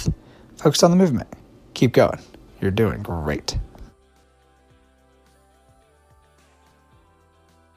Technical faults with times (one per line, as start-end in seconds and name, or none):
4.23 audio missing between chunks
6.71 audio missing between chunks